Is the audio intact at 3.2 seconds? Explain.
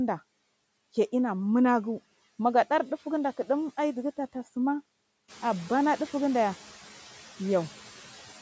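No, noise suppressor artifacts run throughout: steady noise is pulled down about 10 dB between phrases, leaving noise that sinks between words and rises under them, which shows as patchy low-level speckle on a spectrogram.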